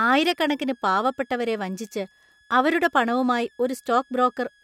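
Right from the start and all the way through, there's a switching supply whistle under the speech: a thin high tone wandering between about 1.61 and 1.78 kHz, sitting roughly 35 dB down. It comes from a switching power supply cycling at an audible rate.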